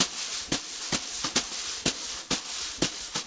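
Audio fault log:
0.8 s, skip ahead: the audio jumps forward with no gap filled, losing roughly 0.7 s of material. The receiver dropped a chunk while later audio was already queued, so the two sides of the cut butt straight together and the delay shrinks by about that much.
0.9–3.24 s, jitter buffer speed-up: everything after the jump plays about 6% fast at unchanged pitch, a bit hurried. The buffer was still holding more than it wanted, so it kept snipping out tiny pitch-period slices, around 150 ms in total.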